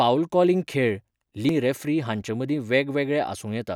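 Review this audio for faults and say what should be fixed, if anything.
At 1.49 s there is damaged data in a compressed stream: corrupted bytes make the decoder lose frame sync, producing a brief blip in the speech. Verify transfers with checksums and re-fetch or replace the corrupted segment from a clean source.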